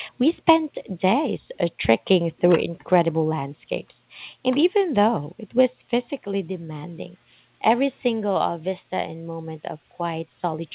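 Nothing in this speech recording sounds technically faulty.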